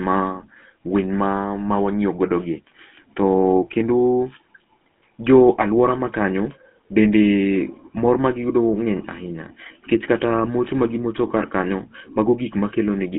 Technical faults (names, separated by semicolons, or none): GSM full-rate codec